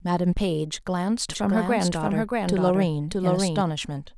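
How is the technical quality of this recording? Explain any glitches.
The recording has a doubled audio track. From 1.29 s to 3.61 s, the speech plays twice. A dry copy trails about 0.7 s behind, a few dB quieter. It likely comes from a second, slower capture path, and it starts and stops abruptly.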